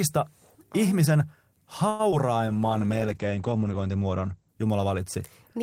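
At 1.89 to 2.01 s, a short stall from a late packet holds the speech about 98 ms; the spectrogram shows frozen, smeared harmonics, and later audio arrives 98 ms later.

At 2.11 to 2.14 s, short concealed packet loss drops 20 ms of speech, bridged by a brief extrapolated fill, heard as a brief smear.

From 2.48 s to the end, a call bitrate drop from 32 to 10 kbps narrows bandwidth from 20 kHz to 8 kHz. The spectrogram's upper band goes empty and the speech sounds muffled and watery.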